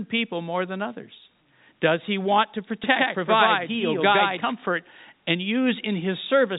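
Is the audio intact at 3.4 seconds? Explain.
No. At 3.4 seconds the speech is heard twice: a second, equally loud copy trails the first by about a tenth of a second, giving a stuttering, slap-back effect with no room tail, and it cuts in and out abruptly. This doubled audio track runs from 2.84 to 4.52 s. The likely cause is the same signal being captured again over a slower path, or an edit leaving two out-of-step copies layered together.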